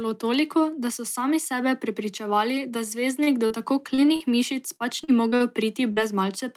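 Speech clip with a rough patch of network damage from about 3.2 s to 6 s. Right after "sami sebe prepričevali da", at 3.23 to 3.30 s, there's a short stall from a late packet: the jitter buffer ran dry, so the last bit of sound gets held for roughly 34 ms until the data shows up and playback picks up where it left off. Nothing is lost, but that moment drags. A smaller one follows at 4.06 to 4.11 s, held about 17 ms. Mixed in are short concealed packet losses at 3.46, 3.94, 4.16 and 5.92 s. Each time about 40 ms of audio never arrived, and the receiver bridged it by extending the previous sound for around 35 to 44 ms before crossfading back. You hear it as a brief smear or wobble, and a quick consonant can drop out. Between 4.76 and 5.43 s it turns into repeated packet loss with that robotic quality. There are four gaps close together, the longest about 41 ms, around 120 ms missing in all, and roughly a quarter of that stretch is patched rather than real. 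The back-to-back patching makes it sound choppy, with bits of the speech gone.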